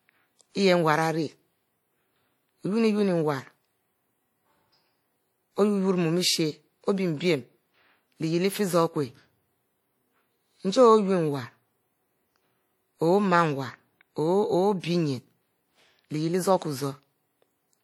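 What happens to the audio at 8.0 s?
Low-bitrate audio saved at a high bitrate affects the speech at 8.0 s, as it does across the whole clip. The file is an MP3 whose sound fits a likely earlier pass through a low-bitrate codec, something like WMA at around 48 kbit/s, before re-encoding at a rate near 256 kbit/s. The second encode could not restore the detail the first one discarded, so the speech keeps those earlier coding artefacts, with the band ending near 20.1 kHz.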